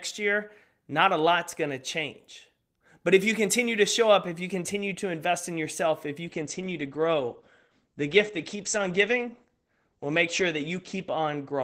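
Speech with a call bitrate drop from 6.27 s onward: coding falls from 32 to 12 kbps, so it turns rough and muffled, and the spectrogram loses everything above 8 kHz.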